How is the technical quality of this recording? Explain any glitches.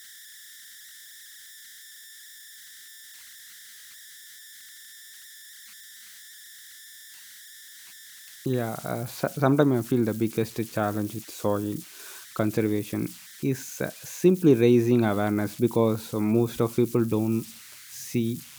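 The recording has one fault, and it lasts the whole clip. Converter idle tones appear as a whistle around 2 kHz, about 22 dB below the speech, with grainy noise under quieter passages. An undithered delta-sigma converter falls into repeating bit patterns on small inputs. Those patterns produce tones.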